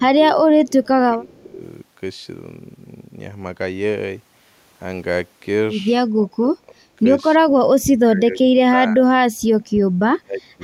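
Speech suppressed in double talk in this speech clip at 0–1.63, 6.1–6.99, 7.37–9.16 and 9.81–10.62 s, likely an echo canceller turning down its own talker along with the loudspeaker echo: waveform dips roughly 15–25 dB, the spectrogram thins and breaks up.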